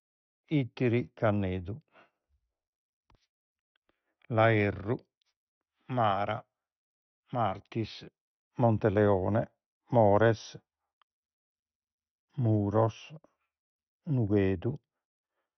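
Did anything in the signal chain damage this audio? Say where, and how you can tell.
Yes: MP2 compression damage runs through the whole speech clip, at the codec stage. Nothing survives above 6.2 kHz, and the remaining bands gurgle and flicker with grainy quantisation, which fits a starved encoder, likely MPEG Layer II near 48 kbps, switching upper sub-bands off.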